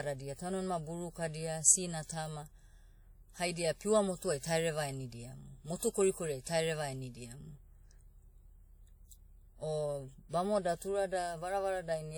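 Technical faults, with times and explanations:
throughout: WMA compression, likely from a transform codec at a low rate; the damage is plainly audible as a ringing, washy quality with a hiss that swells and fades with the speech. The audio still reaches about 20.1 kHz, so this is not band-limiting or a dull low-pass. The smearing and the zeroed weak detail point to coarse quantisation in long transform blocks, which fits a rate near 48 kbps.
5.79–5.82 s: pre-echo, a short burst of hiss about 33 ms long in the quiet moment just before "korikoriai tahereva enidiamu". The onset lands late in a transform block, so the quantisation noise sized for the loud attack spreads backward through the whole block and fills the silence ahead of it. The noise comes before the sound, never after it, and the attack is softened. That is what separates it from reverb or an echo tail.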